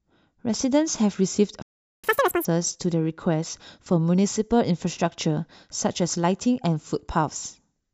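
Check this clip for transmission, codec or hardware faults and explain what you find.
Two faults show up, both from the playback side rather than the codec.

From 1.62 to 2.04 s there is a playback stall. The speech stops mid-flow for about 0.41 s, most likely because the player ran short of data or its thread was blocked. Unlike a dropout, nothing is lost: the sound resumes where it stopped.

From 2.04 to 2.45 s comes catch-up at higher speed. The player resamples its backlog at 2.0 times normal rate to recover the lost time, so the speech turns fast and chipmunk-like, raised by around ten semitones. It then drops back to normal.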